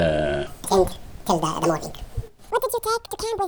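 Wrong sample rate from 0.47 s to the end: the audio is played back at twice the speed it was captured, with no conversion, so it runs 2.0 times faster and an octave (12 semitones) higher. This fits material recorded near 22 kHz being played at 44.1 kHz.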